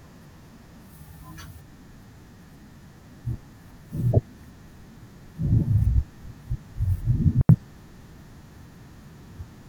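At 7.41 s the speech drops into a clean hole for about 81 ms, ending at 7.49 s. That's a digital wireless dropout: the radio link lost too much data, so the receiver muted with a quick fade, leaving near silence with no noise burst either side.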